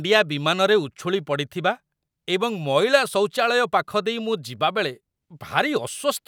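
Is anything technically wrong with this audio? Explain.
No, nothing in this speech recording points to a technical fault in the signal.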